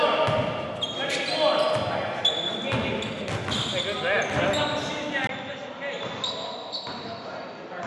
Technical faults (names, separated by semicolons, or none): input switched to a poorer device